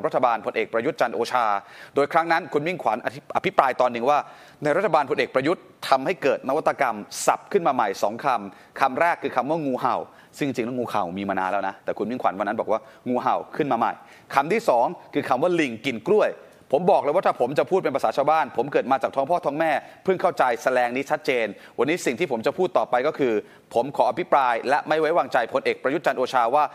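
Nothing in the audio stood out as a technical fault on listening.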